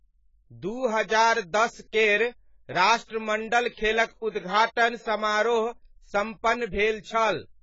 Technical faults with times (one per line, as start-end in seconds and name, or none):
0.00-7.62 AAC compression